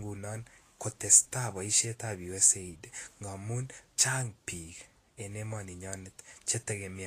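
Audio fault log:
Throughout, Vorbis compression: the speech was likely encoded with a low-bitrate lossy codec, around 36 kbps. Nothing sounds above about 14.2 kHz, and the remaining treble is replaced by hiss-like noise of similar energy, so sibilants turn grainy, tones roughen and consonant attacks blur, plainly audible.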